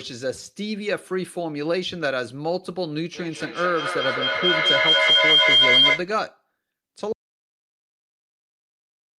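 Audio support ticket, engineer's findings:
Feedback howl, 3.15–6.15 s. Tone near 3 kHz swells over the speech and peaks about 8 dB above it, pulsing roughly every 200 ms. Probable component: a second device in the same room on the call, with each device's speaker feeding the other's mic so each pass adds gain. Spectrogram: a bright horizontal line near 3 kHz with periodic brightening. Waveform: a rising, fluttering envelope until the loop breaks.

Audio dropout to silence, 7.13 s to end of clip. Speech stops abruptly with no fade, and no room tone follows. Likely cause: the input device was lost or muted while the recorder kept writing silence. Waveform: a flat, near-silent line from the cut onward. Spectrogram: dark across all frequencies, with no room tone.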